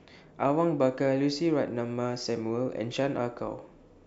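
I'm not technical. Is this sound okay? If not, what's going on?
Yes, this sound is okay, and nothing is going wrong with it.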